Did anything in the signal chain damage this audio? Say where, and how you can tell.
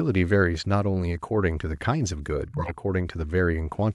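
Yes: at the codec stage, compressed frames were skipped around 2.44 to 2.72 s. The sound jumps ahead about 50 ms.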